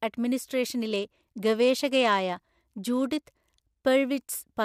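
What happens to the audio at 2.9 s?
At 2.9 s the speech is inside a Bluetooth SBC bit pool drop that runs from about 0.91 s to 3.83 s. The encoder has cut its bit allocation, which fits a bit pool falling from 31 to 15 and a rate near 105 kbps, so the upper sub-bands get few or no bits and the rest are quantised coarsely. The treble is dulled and a gritty noise sits on the speech until the rate recovers.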